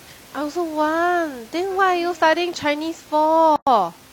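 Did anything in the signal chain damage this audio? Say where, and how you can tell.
Yes. The damage comes from the codec stage, where separately encoded pieces were joined. A gap at a join of encoded pieces opens at 3.56 s and lasts about 108 ms, to 3.67 s. The speech drops out and then resumes exactly where it stopped. The edges are smeared by the codec. The silence is leftover encoder delay and end-of-piece padding that was never trimmed. The room noise, about 26 dB below the speech, falls away inside the gap.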